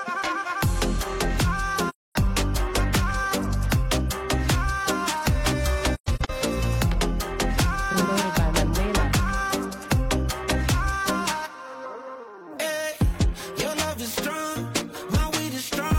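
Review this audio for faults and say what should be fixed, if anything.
AAC frame loss with muting at 1.89–2.16 s (256 ms lost, consistent with six frames) and 5.94–6.31 s (213 ms lost across 341 ms, longest gap around 150 ms). The decoder zeroes the missing spectra, and the overlapping windows fade the sound out and back in, leaving soft-edged holes. Protect the stream with forward error correction or retransmission, and replace muting with spectral concealment that interpolates from neighbouring frames.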